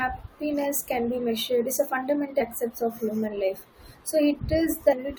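Speech with damaged data in a compressed stream. Brief glitches occur at 2.40 to 2.42 s and 4.92 to 4.94 s, where corrupted frames threw the decoder out of sync.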